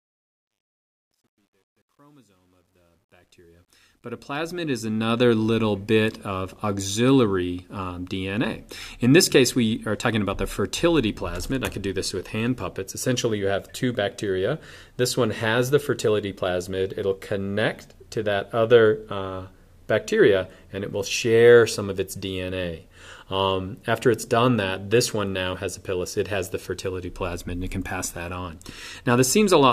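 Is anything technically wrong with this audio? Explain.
Yes. The opening fade-in shows truncation distortion from 0.0 to 5.34 s, and it is worst from 0.0 to about 3.68 s. The fade's gain stage dropped low-order bits with no dither, consistent with roughly an 11-bit word length. At low levels the signal falls onto a handful of quantisation steps. The result is a gritty sound. On a waveform the quiet start shows stair-stepped, squared shapes. A spectrogram shows harsh broadband harmonics tracking the signal, where smooth decay would be expected.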